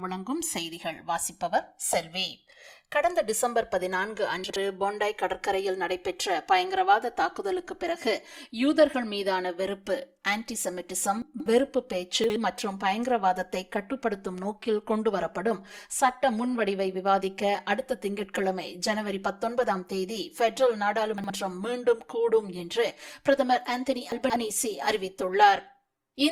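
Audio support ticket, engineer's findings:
Channels drifting apart, whole clip. Slow flanging when summed to mono. Comb notches sweep steadily through the spectrum. Probable component: two capture devices on separate clocks. The mismatch is roughly 300 ppm, so the inter-channel delay keeps sliding and reaches around 7 ms by the end. Mechanism: unsynchronised sample clocks, with no shared word clock or resampling to lock them.

Chunks out of order at 4.44–4.56 s, 11.22–11.46 s, 12.24–12.36 s, 21.18–21.30 s and 24.12–24.36 s. Heard as short jumbled moments. Probable component: the packet reorder or write buffer. The audio moves in 60 ms chunks. One chunk plays late at 4.44, 12.24 and 21.18 s. One chunk plays three chunks late at 11.22 and 24.12 s. Nothing is missing, only misplaced.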